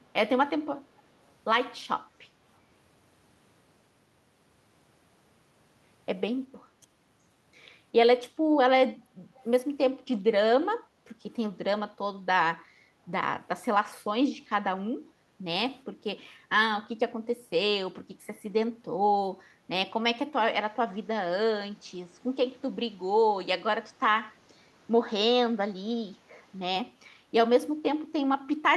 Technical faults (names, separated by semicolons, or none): echo leak; input switched to a poorer device